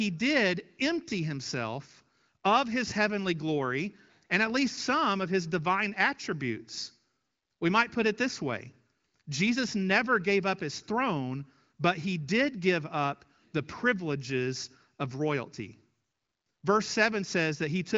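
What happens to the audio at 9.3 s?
Nothing goes wrong at 9.3 s: the audio is intact there, carried cleanly by the AMR wideband (HD Voice) codec with no audible damage.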